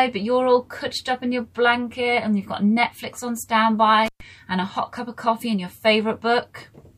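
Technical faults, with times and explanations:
4.06–4.21 s, intermittent contact: a loose connection opens for about 119 ms, so the sound drops to faint hiss between crackly edges, seen as a near-flat waveform gap bracketed by broadband spectrogram spikes.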